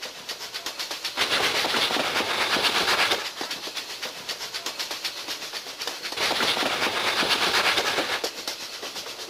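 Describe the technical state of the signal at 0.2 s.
At 0.2 s the audio is intact, with no dropout, distortion or other fault at that point.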